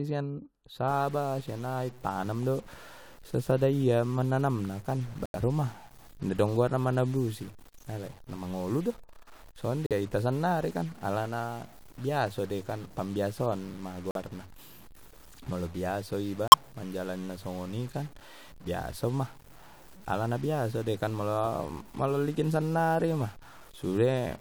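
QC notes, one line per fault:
0.88–24.4 s, stuck bit: from 0.88 s to the end the speech carries added distortion, and the pauses fill with a steady noise floor. This is likely a single data bit stuck at one value, so about half the samples are offset by that bit's weight.
5.26–5.36 s, 9.86–9.92 s, 14.11–14.16 s and 16.48–16.54 s, corrupt frame muted: abrupt holes of 102, 56, 52 and 64 ms. They fit two to four rejected codec frames replaced with silence by the player. Timing continues unbroken after each gap.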